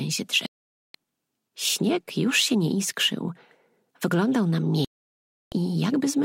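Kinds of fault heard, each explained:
Digital broadcast dropout, 0.46 to 0.95 s and 4.85 to 5.53 s: the sound cuts to silence twice, for about 480 ms and then about 672 ms, and resumes further along in the programme with the missing part gone. The receiver stopped getting decodable frames and muted its output until good ones returned. The gaps fit runs of roughly 15 and 21 lost frames of about 32 ms each.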